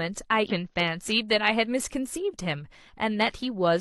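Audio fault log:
0.47–0.52 s, damaged data in a compressed stream: just under half a second into the speech there's a short burst of garbage, a brief glitch lasting about 50 ms. What's going on is that a patch of the encoded stream got corrupted, so the decoder either misreads those frames and spits out nonsense or drops them, then loses its place and has to hunt for the next valid frame header before clean audio picks up again.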